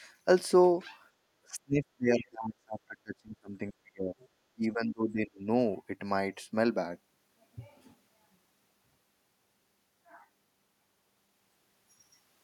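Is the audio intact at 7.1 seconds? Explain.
Yes, the speech at 7.1 seconds plays through intact, with no audible fault at that moment.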